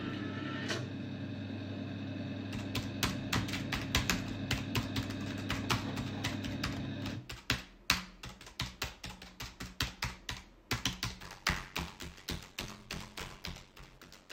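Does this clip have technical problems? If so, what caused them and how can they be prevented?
Yes. From 11.22 s to the end, the sound shows a block size mismatch (padded). One stage delivers blocks shorter than the next stage reads, so each read block is topped up with silence. The 93.8 Hz buzz that appears fits a 512-sample read block. Because each block carries only about 62.5% real audio, the sounds play at 0.625 times normal speed while keeping roughly their normal pitch. On a waveform the signal is cut by regular flat gaps at about 10.7 ms spacing. On a spectrogram this appears as evenly spaced vertical stripes, with a harmonic comb at multiples of 93.8 Hz. To prevent it, make sure every stage agrees on the buffer size, or put a FIFO between stages so that partial blocks are accumulated instead of padded.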